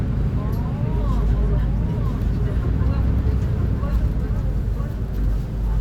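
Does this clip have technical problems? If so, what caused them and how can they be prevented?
Yes. A doubled audio track runs throughout: a full-band copy trails about a second behind, somewhat quieter, with no decay. The likely cause is a second capture path. Route the audio only once.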